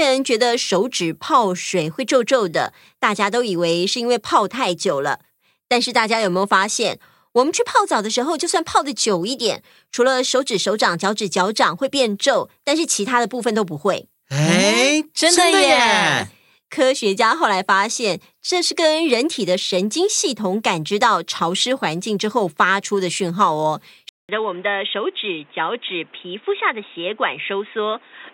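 At 24.09 s the speech cuts out for about 200 ms, then returns dull and boxy for the rest of the clip, to 28.34 s. Nothing above 3.8 kHz survives, the level sits around 5 dB lower, and a new background noise appears roughly 30 dB under the speech. This points to an input switched to a poorer device, likely a fallback microphone or a headset's call profile, with its narrower band, different tone and its own noise.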